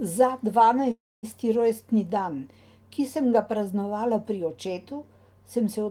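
Packets were likely held up in transit and the jitter buffer ran dry, causing a call audio freeze from 0.91 to 1.25 s. The last sound fades as a brief buzz into 250 ms of silence, then the speech resumes intact, 315 ms late, at "rojstni dan ki sem".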